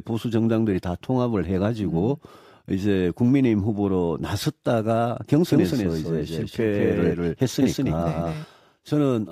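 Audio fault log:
5.48 to 8.44 s, doubled audio track: speech repeats around 200 ms behind at near-equal level, likely a second capture mixed in; the waveform shows offset twin envelopes that start and stop abruptly.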